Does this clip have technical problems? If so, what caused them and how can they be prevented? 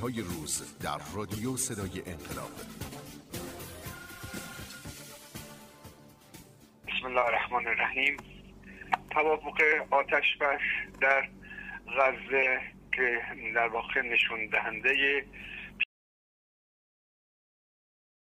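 Yes. The input signal was likely lost while the recorder kept writing zeros, producing an audio dropout to silence from 15.84 s to the end, with no room tone. Secure cables and connections, disable stray mute controls, and monitor input levels during recording.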